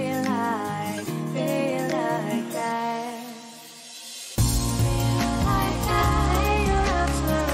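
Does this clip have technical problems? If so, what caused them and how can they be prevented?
Yes. From 5.98 s to the end, a Bluetooth SBC bit pool drop dulls the treble. A congested link pushed the encoder down, which fits a bit pool fall from 28 to 12, starving the top sub-bands. Unlike a simple bandwidth drop, this also brings gritty quantisation noise. Keeping the phone close and away from radio interference prevents it.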